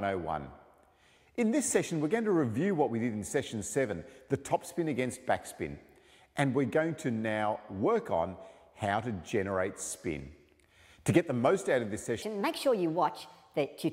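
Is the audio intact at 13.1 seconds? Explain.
No. From 12.22 s to the end at 13.92 s, a section at the wrong speed plays 1.31 times too fast, likely from being clocked at the wrong rate, so the sound jumps about five semitones higher and hurries. Unlike a pure pitch shift, tempo and pitch rise together.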